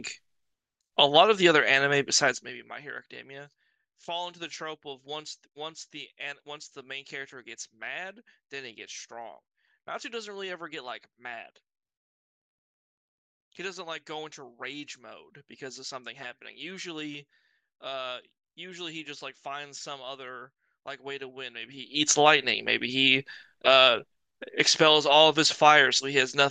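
In this speech clip a fast ticking, zipping texture rides on the sound as the level drops from 2.2 to 2.8 s, and again as it rises from 21.6 to 22.1 s. This is zipper noise. Each gain move, roughly 15 dB down and then back up, is applied as a staircase of 1 dB jumps with no smoothing, at around 30 and then about 40 steps per second, and every jump leaves a small click in the waveform.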